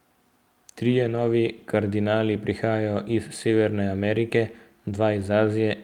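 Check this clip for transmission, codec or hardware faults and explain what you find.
One transmission fault is present. From 1.03 to 1.29 s, a lost packet rebuilt from error correction occurred seven times: a low-bitrate copy carried in later packets replaced the missing speech. It sounds rougher and noisier, with no gap or smeared repeat as plain concealment would leave.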